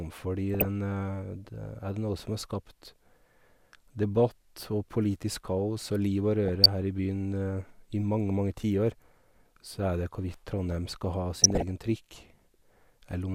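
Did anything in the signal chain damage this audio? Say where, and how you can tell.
Yes, DAB burbling in decoding, 0.54–0.65, 6.45–6.66 and 11.36–11.71 s: bit errors corrupt MP2 sample data, so single sub-bands flicker as bright spectrogram blocks.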